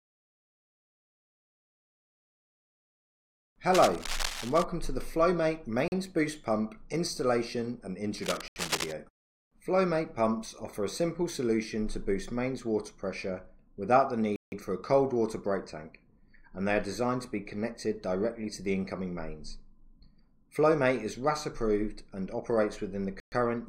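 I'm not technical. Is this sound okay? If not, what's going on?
No. Two things go wrong. First, cable scratch noise: a worn cable or connector was likely jostled, making its electrical contact flicker. That lays a fairly loud, gritty scratching over the sound from 3.73 to 4.63 seconds and again from 8.18 to 8.94 seconds.

Second, a block of digital silence: the playback software most likely failed briefly to supply audio in time, so stretches were filled with nothing. The sound cuts out abruptly at 5.88 s (40 ms), 8.48 s (80 ms), 14.36 s (160 ms) and 23.2 s (120 ms).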